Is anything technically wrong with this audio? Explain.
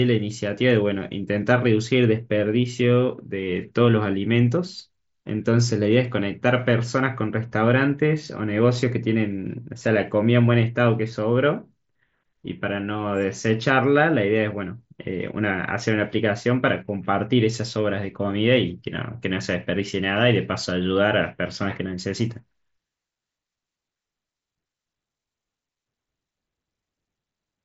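No, nothing is technically wrong with this speech. It comes through a Bluetooth mSBC headset codec, which leaves nothing above 7.7 kHz and a light, grainy texture on the louder sounds.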